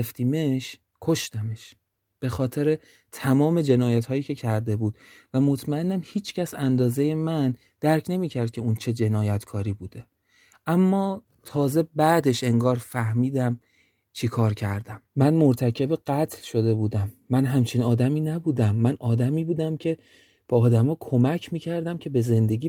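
A lost packet rebuilt from error correction occurs in this speech clip at 5.39 to 5.45 s. Two packets dropped, but the following packets carried low-bitrate copies, so the decoder filled about 40 ms without a gap, leaving a briefly rougher, noisier stretch.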